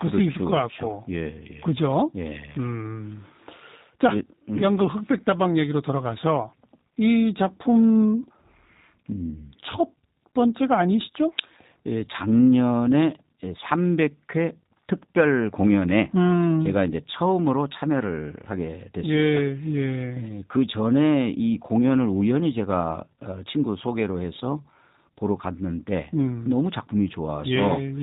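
Throughout the speech, G.729 codec coding is plainly audible. Each stretch is resynthesised from a vocal tract model, a pitch predictor and sparse pulses, leaving a rough, synthetic buzz that fits an 8 kbit/s G.729A stream. A spectrogram shows nothing above 4 kHz.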